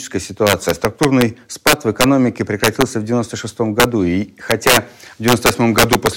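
The audio has integer overflow in six stretches: 0.47 to 1.22 s, 1.67 to 2.04 s, 2.64 to 2.82 s, 3.80 to 3.84 s, 4.51 to 4.77 s and 5.28 to 6.07 s. The signal is pushed about 2 to 4 dB past the integer limit. It is not held at the limit. Each peak that crosses it wraps to the opposite sign and jumps across the full range. Those peaks sound as sharp cracks, harder than clipping.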